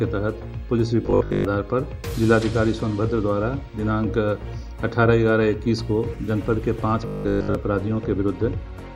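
From 1.03 to 1.45 s and again from 7.07 to 7.55 s, the audio turns into a rigid, metallic buzz pitched at 50 Hz: robotic sound from repeated short buffers. A 50 Hz buzz corresponds to a 20 ms segment being looped, which points to a likely cause of new audio arriving too slowly, with playback filling the gaps by replaying the last buffer. Most of each stretch is repeated material, so the underlying sound survives only as a rough outline.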